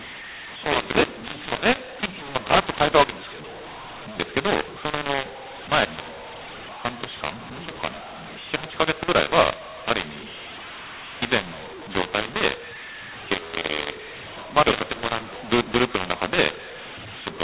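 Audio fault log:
throughout: mu-law and A-law mixed up. The sound was coded as A-law but decoded as mu-law, so every byte maps to the wrong level. Some come out too large, others too small, and near-silent samples jump well above zero, making the telephone-band audio harsh and gritty with noise-filled pauses.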